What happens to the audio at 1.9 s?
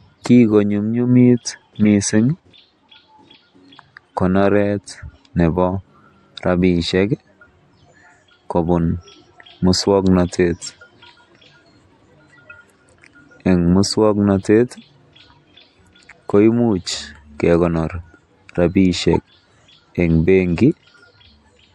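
At about 1.86 s, the decoder played a couple of corrupted frames as if they were valid. Misread gains and codes threw energy into the wrong frequencies, producing a brief, fairly loud chirp or blip in the speech. The whole clip also carries plainly audible damage, likely from MP3 compression at a bitrate around 64 kbps. This shows up as dulled treble and a watery, swirling quality in the speech.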